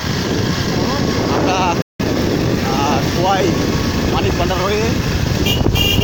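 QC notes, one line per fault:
1.82–2.00 s, playback stall: the sound just drops out mid-flow for roughly 0.18 s, then carries on. Likely the player ran dry of buffered data or its output thread got held up, leaving nothing to send for that gap.
2.00–2.70 s, time-compressed catch-up: right after the gap the audio runs about 1.25 times fast but keeps its normal pitch. The player is trimming its backlog by cutting out tiny slices and cross-fading across the joins.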